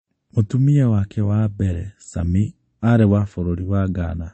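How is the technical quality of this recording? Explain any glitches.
The technical quality is poor, with one fault running the full length of the speech.

MP3 compression, throughout: the damage is plainly audible and likely comes from a low-rate MP3 encode, which fits a bitrate of around 32 kbps. With that few bits, the encoder removes everything above about 8.4 kHz, so sibilants sound dull. It also drops quieter frequency components that flicker in and out between frames, giving a watery, swirling texture and softened consonant onsets.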